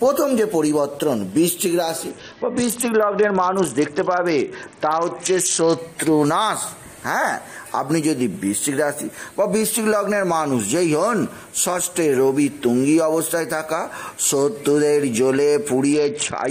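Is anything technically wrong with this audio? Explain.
Yes. A Bluetooth SBC bit pool drop occurs from 2.10 to 5.78 s and again from 15.93 s to the end. The link cut the SBC bit pool, which fits a fall from 28 to 7, near 66 kbps. The top sub-bands get few or no bits and the rest are coarsely quantised, so the treble dulls and gritty noise rises.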